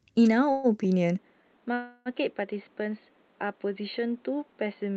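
A call audio freeze runs from 0.51 to 0.67 s. The last sound is stretched into a fading buzz for about 122 ms. This is likely because delayed packets emptied the jitter buffer. When they arrive, the speech resumes where it stopped, so nothing is lost but a gap is inserted.

At 1.19 s the input switched to a poorer device, likely a different microphone or a headset's call mode. From there to the end, nothing above 4.4 kHz survives, so the speech turns dull and boxy. It drops roughly 10 dB in level and gains a new background noise floor about 30 dB below it, with no silence at the changeover.

A second, longer call audio freeze follows from 1.74 to 2.09 s. The held sound fills about 321 ms and dies into roughly 10 ms of silence before the speech picks up again, delayed but with nothing missing.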